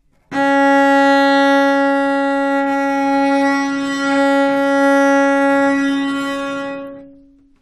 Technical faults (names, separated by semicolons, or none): none